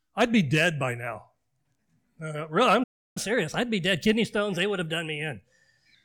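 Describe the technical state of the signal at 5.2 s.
At 5.2 s the speech is in catch-up at higher speed, running from 3.17 to 5.95 s. Playback is resampled to 1.1x, raising pitch about a semitone and a half.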